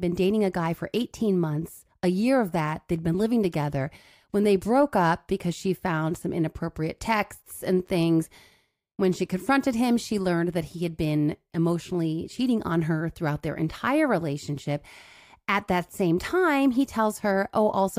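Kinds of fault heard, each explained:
No technical faults can be heard anywhere in the signal; level, continuity and frequency content stay intact throughout.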